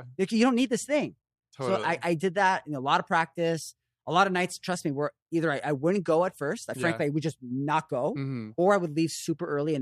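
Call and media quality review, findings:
No audible faults found.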